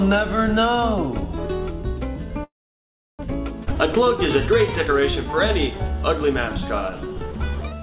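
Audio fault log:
2.44–3.21 s, call audio freeze: The sound stops for about 0.75 s. A brief tail of the last sound carries on, then roughly 0.69 s of silence follows. Playback then resumes from where it left off, so a pause has been inserted and nothing is lost. The likely cause is packets held up in transit. The jitter buffer ran dry, its concealment faded to nothing while waiting, and the stalled audio arrived late and added about 0.75 s of delay.
3.65–3.69 s, skip ahead: Playback jumps forward abruptly, with a join only about 17 ms long. Roughly a third of a second of audio is missing, and the material on either side is butted together almost directly. This fits the receiver discarding a stretch of audio to catch up after the earlier stall, since later audio was already queued. The dropped material takes back about 300 ms of the delay the freeze had built up.
5.72–7.82 s, jitter buffer slow-down: Over this final stretch the audio plays at about 88% of normal speed without any change in pitch. 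Sounds are drawn out. This happens when the jitter buffer, running low on reserve, repeats individual pitch cycles and fragments of quiet passages many times in a row to stretch the signal. In total about 259 ms is added across the span. The narrowband call path is audible too, with nothing above 4 kHz, which fits G.711-style telephone coding.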